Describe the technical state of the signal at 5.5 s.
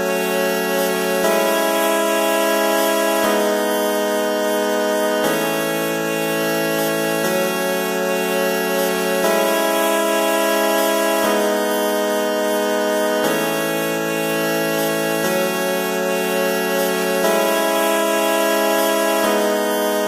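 At 5.5 s the signal is intact, with no dropout, clipping, distortion or other technical fault.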